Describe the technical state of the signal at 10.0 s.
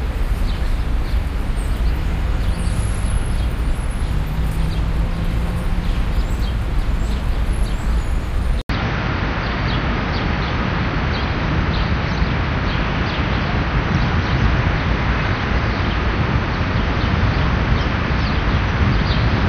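The input likely switched to a poorer device at 8.61 s, after an 80 ms silence, and stays on it until the clip ends. That device passes nothing above 6.3 kHz, so the sound at 10.0 s is dull, with new background noise roughly 30 dB down.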